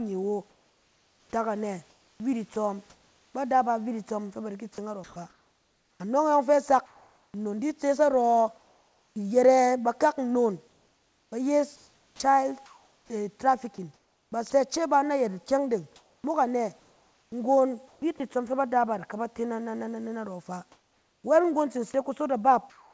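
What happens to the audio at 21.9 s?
At 21.92 s a short piece of sound, about 10 ms of it, gives way to steady noise for roughly 20 ms, then returns. This is sound dropped by the voice detector. The sender's detector most likely judged that brief, quiet moment to be background and stopped sending. The receiver filled the gap with synthetic noise. The result is a tiny dip where the real sound thins into a flat hiss.

This sits inside a longer stretch of comfort noise in place of the background, from 20.72 s to the end at 22.93 s. In the pauses the real room noise, about 42 dB below the speech, is swapped for a smooth, featureless hiss. That points to discontinuous transmission, with the receiver generating noise shaped roughly like the room. It sounds steadier and flatter than the genuine background.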